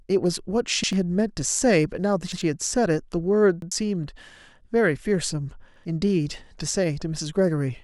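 Repeated buffers stutter the speech at 0.84, 2.32, 3.62 and 5.76 s. Each time, a 93 ms piece plays twice with a hard join, which fits a 4096-sample buffer.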